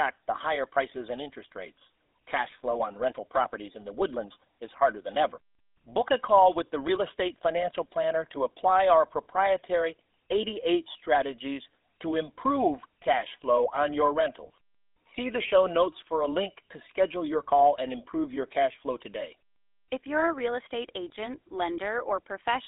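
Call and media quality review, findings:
GSM full-rate codec, throughout. Buzzy, gravelly speech; band roughly 250 Hz to 3.6 kHz, nothing above 3.8 kHz. Pulse-excited vocal-tract model, excitation decimated to every third sample; plainly audible roughness fits a 13 kbps full-rate leg.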